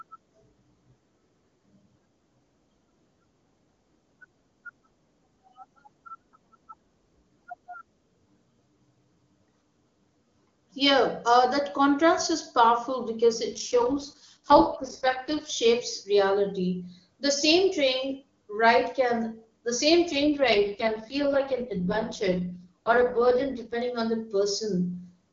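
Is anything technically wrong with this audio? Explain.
Yes, the speech twice turns rough, buzzy and synthetic without any gap or loss of bandwidth: from 13.52 to 15.50 s, after "powerful because" and before "shapes reality", and from 20.11 to 23.82 s, after "ride can the same". This is an AMR rate drop. The wideband AMR codec is stepped down from a clean high rate, which fits 23.85 kbit/s, to one of its lowest modes, which fits 6.6 kbit/s, spending bits on protection before recovering.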